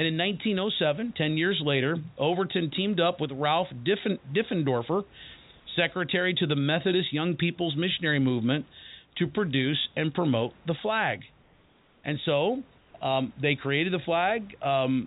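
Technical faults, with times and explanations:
11.42–12.04 s and 12.78–12.94 s, comfort noise in place of the background: the sender likely paused transmission in these gaps, so steady, featureless synthetic noise, about 3 dB and 4 dB quieter, replaces the room background.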